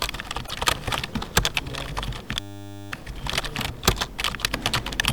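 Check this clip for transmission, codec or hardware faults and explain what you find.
Three faults can be heard, of three different kinds.

From 0.46 to 0.51 s there is a brief garbled disturbance lasting about two frame-lengths, with the audio jumping ahead across it. This is likely a broken MP3 bit reservoir. Frames were lost, and the following frame reached back into the reservoir for borrowed bits that now belonged to a different frame. Its decoding came out garbled, and the duration fits MP3 frames of 26.1 ms.

At 1.45 s the sound skips abruptly, with roughly 50 ms gone and the two sides butted together with no gap. The likely cause is audio missing between chunks. The capture or processing chain appears to work in 2.0 s blocks, and a short stretch was dropped while one block closed and the next opened. The splice lands at one block boundary, so it is a single skip.

From 2.40 to 2.92 s the sound turns into a steady buzz at 100 Hz, pitched and mechanical. 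This is a system hang loop. The host or driver stalled while the audio hardware kept replaying the same 10 ms of its ring buffer, about fifty times over. A loop that short repeats fast enough to fuse into a tone instead of a stutter, and roughly half a second of the real signal is lost beneath it.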